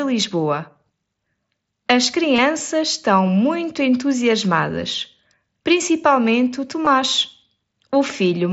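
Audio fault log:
2.36–2.38 s and 6.85 s, concealed Bluetooth headset packet loss: two short gaps of about 22.5 ms and 15 ms in the link between headset and phone were filled by repeating the best-matching recent stretch of waveform. That keeps the level steady, so each gap passes as a brief buzzy flicker rather than a dropout. On a waveform the patch is a suspiciously regular, periodic stretch. A spectrogram shows evenly spaced harmonic lines and a slight smear where real audio resumes, above the mild graininess of the wideband mSBC link.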